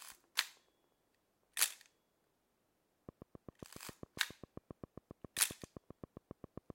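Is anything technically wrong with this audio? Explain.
Yes, there's a train of clicks running from 3.09 s to 6.71 s. It's a steady, evenly spaced ticking at about 7.5 clicks per second, roughly thirty in all, each with much the same sharp shape and peaking around 10 dB above the rest of the sound, so they poke right through. That regular repeating pulse is likely coming from electrical interference from nearby gear or a faulty connection or power supply, rather than anything in the source itself.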